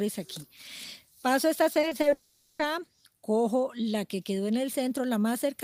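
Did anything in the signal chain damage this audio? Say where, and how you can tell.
Yes. The network stage lost packets repeatedly between 1.73 and 2.05 s. There are four short gaps, none longer than 20 ms, and the receiver patched each one by extending the preceding audio. About a quarter of that span is fill, which produces a choppy stutter with fragments missing.

From 2.13 to 2.61 s the sound becomes a smeared, fading continuation of what came before, lasting about 460 ms without dropping to silence. Audio then resumes with that stretch absent. This is likely a long network dropout, concealed throughout by the receiver.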